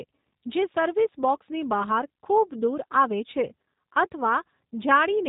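Throughout the clip, the speech has been squeezed through a G.729 codec. It discards the original waveform and resynthesises each 10 ms frame from a vocal tract filter, a pitch predictor and a handful of coded pulses. The rough, slightly synthetic texture fits the very low 8 kbit/s rate of that scheme. Nothing survives above 3.8 kHz, so the speech sounds muffled and telephone-like, and the codec damage is plainly audible.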